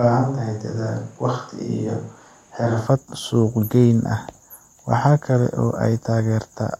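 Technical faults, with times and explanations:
0.00–2.85 s, switch to a distant microphone: the clip opens already in this state, with the speech sounding roomy and hollow, thin in the bass, about 5 dB quieter, and carrying a room-noise floor roughly 35 dB below the speech. At 2.85 s the sound snaps back to close, full and direct. The likely cause is the close microphone's feed dropping out, leaving a pickup farther from the talker that captures more room reflection and ambience and less low-frequency proximity energy.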